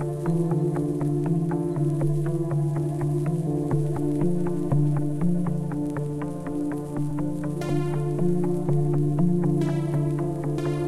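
At 7.10 s and again at 10.57 s the sound jumps forward slightly: compressed frames were skipped. Each time, roughly 30 ms of audio never plays, which fits a few whole codec frames being lost from the file or rejected by the decoder as damaged. Each join comes across as a small discontinuity in the ongoing sound.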